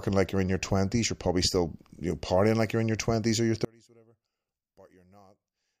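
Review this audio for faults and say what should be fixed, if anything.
From 3.65 s, after "your twenties or your", the speech falls about 33 dB to a faint trace until the end. That's likely one channel inverted, cancelling the centred voice in mono. To prevent it, check both channels' polarity before folding down to mono.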